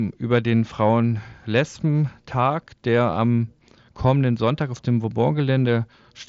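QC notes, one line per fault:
No faults detected.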